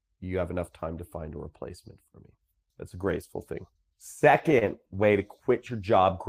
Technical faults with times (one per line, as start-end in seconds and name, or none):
4.59-4.64 short stall from a late packet